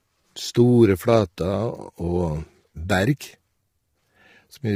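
A speech clip with low-delay AAC compression throughout. The voice sounds rough and grainy. Noise fills the gaps between harmonics, and the top band seems thinned or synthetic. The likely cause is AAC-ELD's short frames at a low bitrate, which fits roughly 24 kbps.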